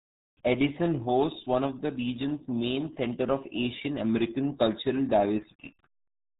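RealAudio 14.4 codec damage runs throughout the speech, from start to finish. The sound is squeezed through an old dial-up speech coder at what sounds like about 8 kbit/s, cutting everything above 3.8 kHz and leaving heavily muffled, gargly, smeared syllables.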